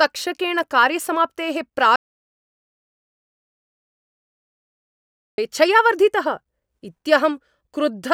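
From 1.96 to 5.38 s, an audio dropout to silence, likely a lost input, cuts the speech abruptly: flat waveform, blank spectrogram, no room tone.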